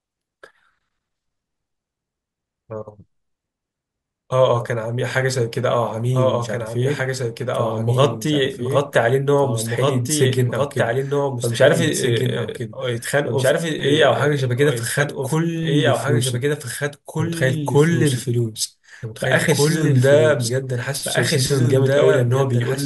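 All the way through, the speech has a doubled audio track: a clean copy trails about two seconds behind, a few dB quieter, likely from a second, slower capture path.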